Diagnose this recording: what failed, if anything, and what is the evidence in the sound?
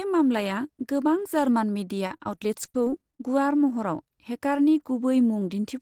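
The network stage failed, causing repeated packet loss (robotic sound) from 2.07 to 3.21 s: 13 gaps, the longest 46 ms, with about a quarter concealed. Each hole is patched by stretching the prior sound, so speech turns choppy with pieces missing. Spectrograms show frozen, smeared harmonic slices, and waveforms show short repeated segments.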